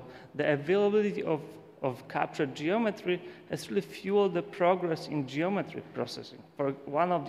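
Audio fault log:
No audible faults detected.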